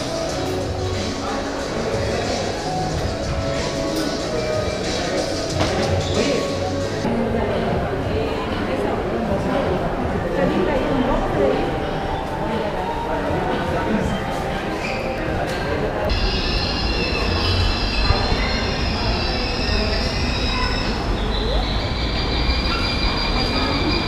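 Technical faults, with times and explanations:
0.46 s, 15.18 s and 18.38 s: dropped buffer (overrun), likely. Each is a jump where roughly 10 ms, or about 20 ms at 18.38 s, vanished and the sound was spliced directly.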